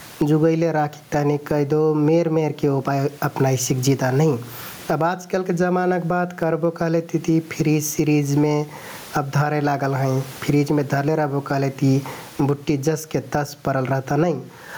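A speech recording with gain pumping all the way through: the level ducks as soon as the talker gets loud, swinging by something like 20 dB. The likely cause is the mic gain being set far too hot, with a fast limiter or compressor clamping down on each loud syllable and letting go in the gaps. The result is squashed, flat-sounding speech, and the room noise sits about 39 dB under the voice.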